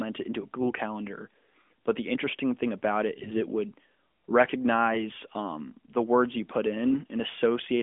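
Right after "the interesting thing about", from 3.14 to 3.41 s, there's a burst of AMR bit errors. A couple of percent of the weakly protected bits arrive flipped over roughly a dozen frames, so the pulses and fine parameters land wrong and the speech goes hoarse and gargly, though pitch and level hold.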